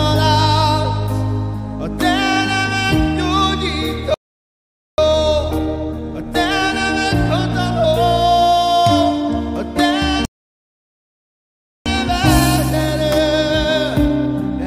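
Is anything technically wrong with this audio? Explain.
Yes, there are two playback stalls, each followed by a stretch of time-compressed catch-up.

Playback stall, 4.14 to 4.98 s and 10.25 to 11.86 s: the player likely ran short of data or had its output thread blocked. The sound cuts out abruptly for about 0.84 s, then about 1.6 s, before resuming.

Time-compressed catch-up, 4.98 to 7.98 s and 11.86 to 14.66 s: to shed the backlog from each stall, the player trims and cross-fades small slices. The audio runs about 1.15 times, then 1.1 times, fast at unchanged pitch.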